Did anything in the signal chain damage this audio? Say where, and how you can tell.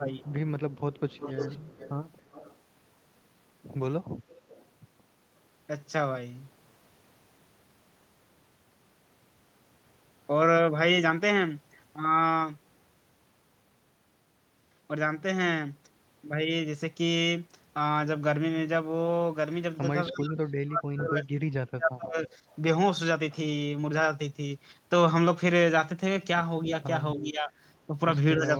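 Yes, in the call processing. Speech suppressed in double talk appears at 0.0 to 0.1 s, 19.81 to 22.29 s and 27.15 to 28.6 s. The level drops by about 15, 35 and 30 dB. The echo canceller likely ducked this side while both talked.

Echo leak sits in the same stage. A delayed copy, 278 ms behind the speech, is heard at 0.17 to 2.56 s, at about 15 dB below the speech. Fainter scraps follow at 4.29 to 4.65 s and 22.49 to 22.57 s. Likely cause: an incompletely cancelled loudspeaker return.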